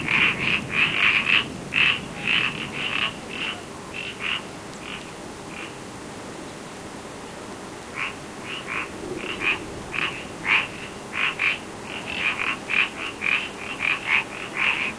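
Nothing here gives a listener any technical fault to point to, so there's no problem to describe in this recording of sounds.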